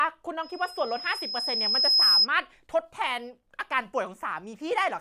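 A speech recording with a loudspeaker feedback squeal from 0.43 to 2.27 s: a 5.1 kHz tone swells over about a second and a half to roughly 10 dB above the speech. On a spectrogram it is a bright horizontal line; the waveform envelope balloons.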